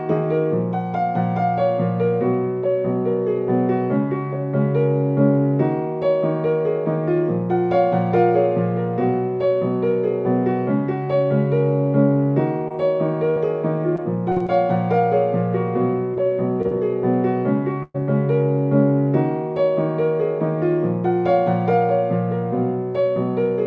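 Between 12.68 and 12.72 s there is short concealed packet loss: about 20 ms of audio never reached the decoder, so the receiver extended the preceding sound, leaving a brief smear. From 13.30 to 13.38 s a burst of packet loss removes about 60 ms. The gap is bridged by holding the last sound and fading it, and playback resumes further on. From 13.96 to 14.50 s, repeated packet loss (robotic sound) leaves four separate gaps, the longest 43 ms, and about 100 ms missing in all, so the sound turns choppy. More short concealed losses of about 20 ms each fall at 16.14 to 16.18 s, 16.62 to 16.66 s and 16.68 to 16.73 s, each heard as a quick wobble. A second burst from 17.83 to 17.96 s drops about 120 ms. Its patch decays into 20 ms of silence before the sound picks up. Throughout, the band stops at 8 kHz, which fits the G.722 wideband call path.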